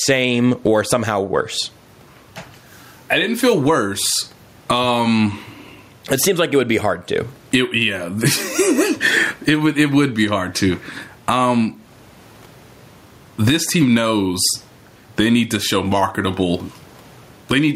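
Gain pumping runs through the whole of this speech recording, with a level swing of about 15 dB. The likely cause is input gain set far too high, with a fast limiter or compressor clamping down on every loud syllable. This squeezes loud and quiet passages together, giving a flattened, squashed delivery, while the room noise sits about 45 dB below the speech.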